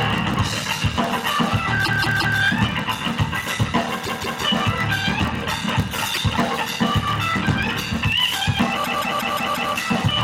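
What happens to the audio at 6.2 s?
From 6.13 to 6.19 s there are repeated frames: a stretch of about 52 ms, which points to two compressed frames, is decoded and played a second time, so the sound stutters and the clip grows by about 52 ms. Unlike a dropout, nothing is lost; the same fragment simply recurs.

Across this moment, as everywhere in the clip, a block size mismatch (padded) is also present: each block, which fits 1024 samples written, is topped up with silence. That produces a steady 38.3 Hz buzz and slows playback to 0.889 times normal speed while timbre stays put, unlike the single localised stutter.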